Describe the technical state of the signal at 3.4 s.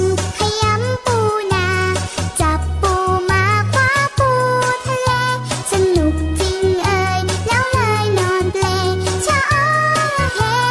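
The signal is intact at 3.4 s, with no dropout, distortion or other audible fault at that point.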